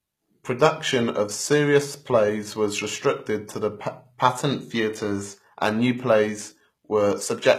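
From start to finish, the speech has a bright but synthetic-sounding top end: s sounds come across gritty and lispy, and the treble carries a metallic sheen rather than natural air, with nothing at all above 14.9 kHz. The likely cause is HE-AAC compression at a low bitrate, which fits roughly 20 kbps. The codec keeps only the lower spectrum and fakes the treble by copying lower bands upward under a coarse envelope, so the rebuilt highs don't match the original harmonics.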